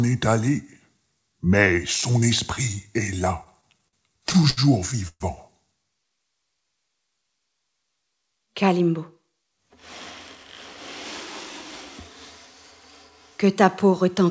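From 3.44 to 4.60 s, packets kept arriving late and the jitter buffer ran dry ten times, causing repeated stalls (stutter). The receiver stretched the last sound over each gap, the longest 71 ms, adding about 0.2 s in all without losing anything, so the audio drags and hiccups.

At 5.08 to 5.23 s there is a call audio freeze, likely from packets held up in transit. The sound hangs as a fading continuation for 123 ms, including about 50 ms of silence, then resumes where it stopped, so nothing is missing.

From 8.18 to 8.74 s a jitter buffer speed-up sets in. The buffer was holding more audio than it needed, so the receiver trimmed tiny pitch-period slices, removing roughly 70 ms. The sound runs at 112% speed with unchanged pitch and feels hurried. Throughout, nothing above 8 kHz comes through the call path.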